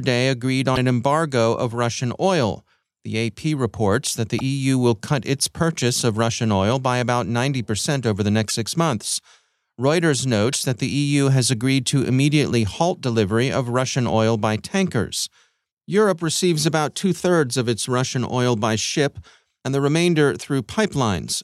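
Four short glitches land at 0.75, 4.38, 8.48 and 10.52 s: just before "an embargo of", between "reports that the" and "will cut its purchase", between "over the" and "six months", and once more without a word landmark. Each lasts about 30 ms, roughly one 26 ms frame. The speech skips forward and sputters, pointing to a likely broken MP3 bit reservoir, where the next frame borrows bits from data that's gone.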